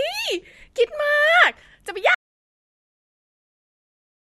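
At 2.15 s the speech cuts to dead silence, an audio dropout to silence lasting to the end, likely from lost input while recording continued writing silence.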